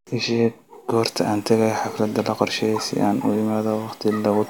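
No technical faults can be heard in this recording.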